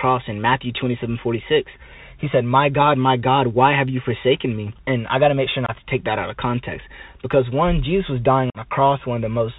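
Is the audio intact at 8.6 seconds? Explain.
No. The Bluetooth CVSD headset codec runs throughout: its one-bit, step-adapting coding at 64 kbps cuts everything above 4 kHz, giving scratchy sibilants and granular hiss, with a spectrogram bare above 4 kHz. Just before, from 8.50 to 8.58 s after "was dying", unconcealed Bluetooth headset packet loss drops several packets, about 45 ms of audio, leaving abrupt-edged holes, seen as flat waveform gaps.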